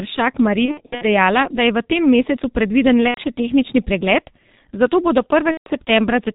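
Throughout, heavy G.723.1 coding, consistent with its 6.3 kbit/s mode, discards everything above 4 kHz and updates its voice model slowly, leaving the speech muffled and hoarse with smeared consonants. VoIP packet loss concealed by the speech codec follows. From 0.65 to 1.07 s, before "dejala da je v", scattered losses totalling about 210 ms make the decoder stretch its last pitch and filter into fading buzz. The same happens at 3.08–3.20 s between "mesecu predviden" and "še tehnični pregled zato", and at 5.51–5.68 s after "tehnični pregled zato bodo".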